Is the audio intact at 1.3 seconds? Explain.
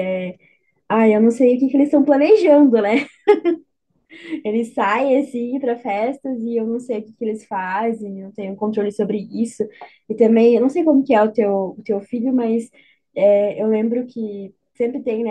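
Yes, the speech at 1.3 seconds is intact, with no dropout, click, distortion or other fault at that moment.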